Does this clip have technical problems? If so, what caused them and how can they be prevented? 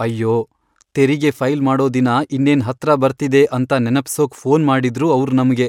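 No, this clip has no technical problems, so there is nothing to prevent.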